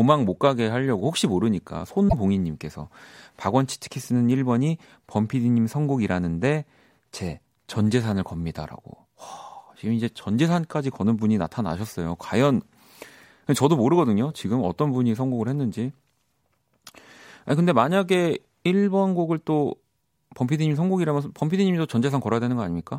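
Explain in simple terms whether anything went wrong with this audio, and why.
Something did go wrong, twice, in this speech recording: damaged data in a compressed stream. At 2.05 to 2.14 s and again at 13.55 s, part of the compressed file was spoiled, so the decoder briefly misread it and had to hunt for a clean spot to resume. Each time, that shows up as a short, odd chirp or blip. Unlike a simple dropout, this damage makes the decoder lose its place and search for the next clean frame.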